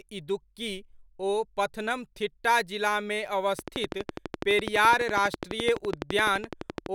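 Speech, with a train of clicks running from 3.59 s to 6.87 s, nearly to the end. The clicks are alike in shape and evenly spaced at about 11.9 per second, roughly forty in all. They sit well above the speech, peaking at about 15 dB over it, and are heard as a steady ticking. A regular pulse like this is likely interference from nearby equipment or a faulty connection or power supply.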